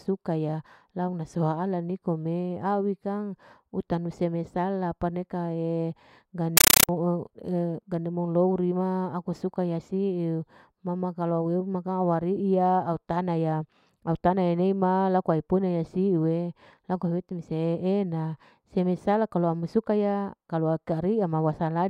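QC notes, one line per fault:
6.57 to 6.89 s, compressed stream played as audio: the speech gives way to harsh, very loud chattering static. That's an AC-3 bitstream treated as plain samples instead of decoded, with 9.33 ms noise bursts and silent padding repeating at 31.25 Hz.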